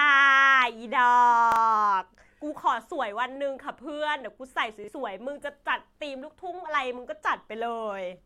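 At 1.52–1.56 s and 4.84–4.88 s, a repeated buffer: fresh audio arrived late, so a 40 ms piece replays once, giving a brief hard-joined stutter and dropping about 40 ms.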